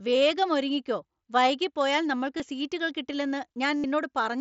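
Concealed Bluetooth headset packet loss occurs at 2.37–2.40 s, after "വൈകി പോയാൽ", and at 3.77–3.84 s, after "സീറ്റുകൾ കിട്ടില്ലെന്ന്". The receiver fills the lost headset packets by repeating recent waveform, so the longer gap holds a buzzy tone at full level rather than falling silent as a plain dropout would.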